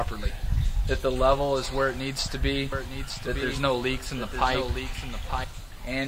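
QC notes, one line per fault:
2.72–5.44 s, doubled audio track: a second full-band copy of the sound runs about one second behind the original and roughly 5 dB quieter, likely because the signal is being captured again through a slower path. The copy has no decay or room colour, and it starts and stops abruptly. On a spectrogram the same patterns repeat, shifted about a second later. The waveform shows smaller duplicate envelopes overlapping the originals, with hard edges.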